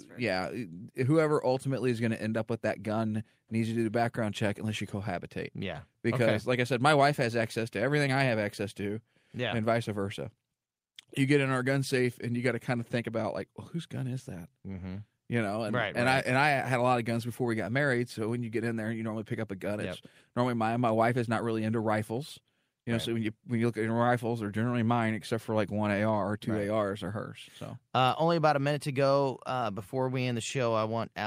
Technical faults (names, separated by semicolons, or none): none